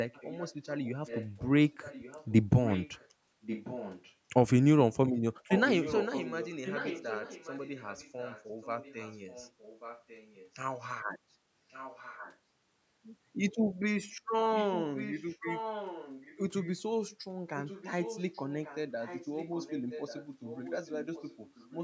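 Echo leak turns up at 0.13–2.33, 2.64–3.09, 3.41–4.13, 5.43–10.51, 11.69–12.38, 14.55–16.78 and 17.56–21.78 s. It's a copy of the speech about 10–15 dB down, trailing 1.14 s behind, likely a loudspeaker on the far end that its echo canceller didn't fully clean up.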